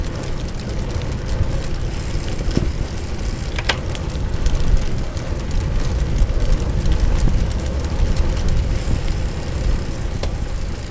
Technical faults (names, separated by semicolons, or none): none